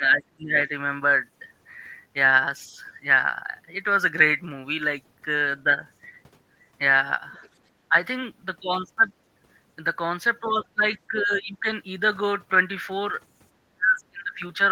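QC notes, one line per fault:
0.0–0.7, 7.89–7.95, 10.62–10.85, 11.07–11.66 and 13.69–14.59 s, speech suppressed in double talk: the talker's level dips in pieces, by about 10 dB at 7.9 s and up to about 35 dB near the end. The likely cause is an echo canceller that mistook overlapping far-end talk for echo and attenuated both.
7.32–7.49 and 11.34–11.40 s, other side's voice leaking through: brief, faint scraps of a second voice, about 35 dB and about 25 dB below the speech, likely loudspeaker echo the canceller failed to fully remove from the microphone.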